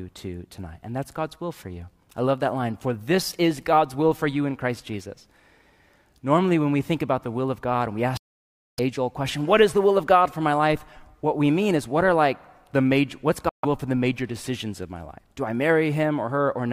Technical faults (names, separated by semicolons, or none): Bluetooth dropout